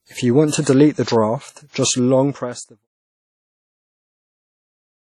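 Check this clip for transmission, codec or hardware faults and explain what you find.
One codec fault runs through the whole speech clip: low-bitrate audio saved at a high bitrate. Although the file is large, which fits an MP3 at around 256 kbit/s, it has nothing above 17.4 kHz and has the thin, swirly texture of a much coarser encode. The likely cause is a WMA file at about 32 kbit/s that was re-encoded. The second encode kept the first one's losses and could not restore what it had removed.

On a spectrogram, energy stops at a flat ceiling near 17.4 kHz across the whole clip, with patchy, smeared detail below it. The waveform itself shows no sign of this fault.

The fade-out, from around 1.5 s to 2.88 s, is a smooth editorial one. It appears as a gentle taper in the waveform with no hard edge.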